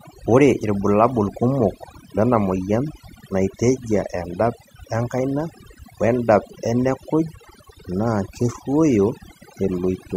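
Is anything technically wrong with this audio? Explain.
Yes. Throughout the speech there is overdone noise removal: an over-aggressive reduction pass mutes any frequency band near its noise estimate, taking quiet speech detail too. The background drops and breaks up into twinkling specks, unlike a noise gate's whole-signal pumping.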